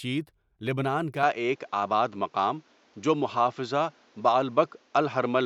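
At 1.23 s the speech abruptly turns duller, losing everything above 7.6 kHz, with no gap; a level jump of around 5 dB and a new noise floor about 35 dB down point to a likely input switched to a poorer device, not mere filtering.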